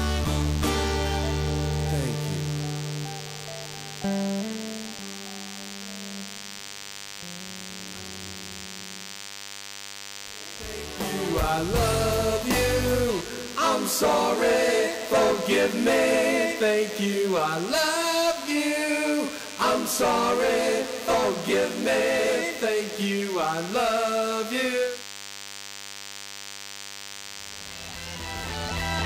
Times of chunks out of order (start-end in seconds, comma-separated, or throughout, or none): none